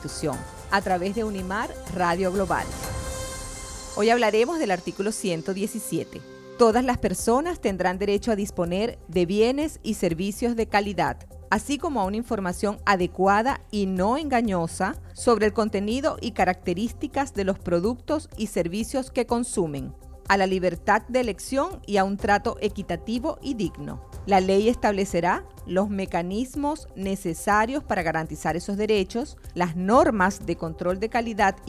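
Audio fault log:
No faults found.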